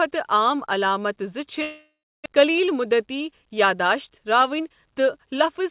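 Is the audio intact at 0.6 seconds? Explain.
Yes, the speech at 0.6 s is intact, carried as a normal call signal with nothing above 4 kHz.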